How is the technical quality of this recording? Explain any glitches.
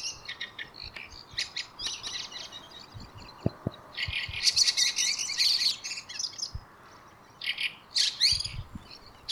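The recording has one clear fault, a doubled audio track. From 2.03 s to 5.71 s a second full-band copy of the sound runs about 200 ms behind, some 5 dB quieter, giving a dry slapback with no decay. It cuts in and out abruptly, likely from a second, slower capture path being mixed in.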